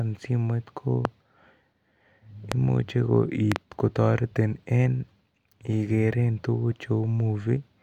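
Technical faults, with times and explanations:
1.05–1.07 s, 2.52–2.54 s and 3.52–3.58 s, loud pop: sharp pulses, roughly 20 dB above the speech (the last a quicker double thump, somewhat softer), likely from an electrical transient such as a switch or static. Unlike clipping or dropouts, the speech continues unbroken underneath.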